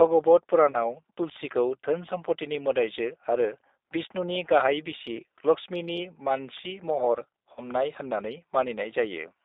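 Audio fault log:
Throughout: G.729 codec. The speech has been squeezed through a low-rate CELP codec, consistent with G.729A at 8 kbit/s. It rebuilds each 10 ms frame from a vocal tract filter, a pitch predictor and a few pulses instead of the actual waveform. The line passes only about 300 Hz to 3.7 kHz, so the sound is boxed-in and thin. The damage is plainly audible as a rough, slightly synthetic buzz over the voice.
0.71–0.78 s and 7.54–7.69 s: VoIP packet loss concealed by the speech codec. Each time, a gap fitting a single lost packet of about 30 ms was filled by the decoder extending its last pitch and filter settings at falling gain. This produces a brief buzzy or smeared tone in place of real speech. The recovery shows in the lengths: the first disturbance lasts about 70 ms and the second about 150 ms, because each frame is built on the previous one.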